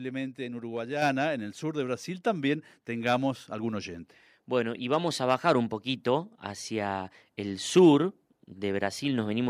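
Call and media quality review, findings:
Microphone volume stepped up at 1.02 s, just before "en el sur de". Speech and room noise jump together by about 5 dB in one step. Probably the call app's auto-gain raising the mic input level after judging it too quiet.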